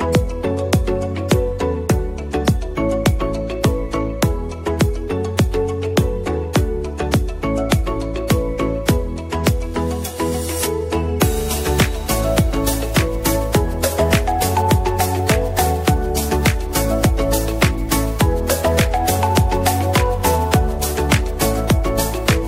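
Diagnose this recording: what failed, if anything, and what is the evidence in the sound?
Nothing stood out on listening; no stage of the chain left an audible trace in the sound.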